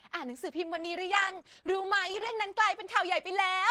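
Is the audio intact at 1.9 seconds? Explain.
No. At 1.9 s the speech sits inside a call bitrate drop from 0.78 to 2.41 s. The encoder codes coarsely, consistent with a fall from 32 to 13 kbps. It sounds rough and muffled.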